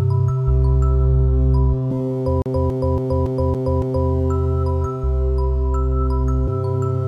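From 2.42 s to 4.10 s the music gets caught in a classic CD stuck on one turn. A chunk about 280 ms long plays six times in a row, each pass cut off by a tiny mute as the pickup jumps back. That's the laser hitting a bad spot and getting thrown back a track on every rotation, so you get that quick, perfectly even stutter of a skipping disc until it breaks free.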